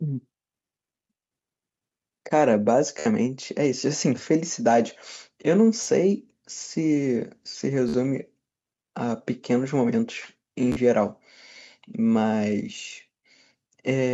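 Speech clip with four episodes of Bluetooth stutter: 2.99 to 3.06 s, 5.84 to 5.87 s, 7.89 to 7.94 s and 10.72 to 10.76 s. In each, audio packets arrived late or not at all, and the receiver kept replaying its last short buffer. That produces a brief buzzing repeat, after which the speech resumes further along as though it had kept playing. The gaps run 66.7, 26.7, 53.3 and 40 ms, which is consistent with losing two to five consecutive packets each time. Nothing is present above 8 kHz, which fits the call's microphone processing path.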